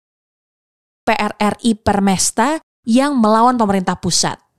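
From 0 to 1.07 s there is only digital silence. Then speech begins abruptly at 1.07 s, already mid-sound. This is a cut-off start. Capture began late, so the opening was lost. There is no natural attack or fade-in.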